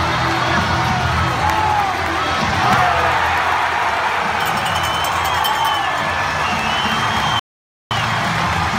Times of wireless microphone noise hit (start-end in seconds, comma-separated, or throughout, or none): none